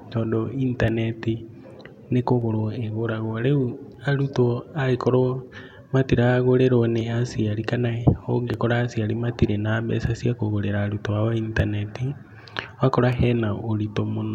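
Two devices running on slightly mismatched clocks, likely differing by around 500 ppm, let the buffer between them drift until roughly 30 samples are dropped or repeated. These clock drift buffer slips recur every 1.53 s from 0.88 to 13.13 s, heard as regular clicks through the speech.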